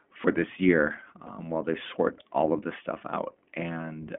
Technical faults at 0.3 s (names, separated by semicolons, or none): iLBC codec